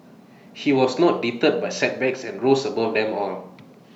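No technical faults are audible.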